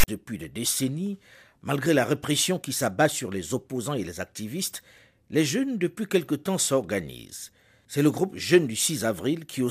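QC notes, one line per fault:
0.00–0.08 s, file tags played as audio. Tag text is decoded as samples, giving a harsh, one-sided rasp. Zero padding then drops to silence before "des décennies malgré la".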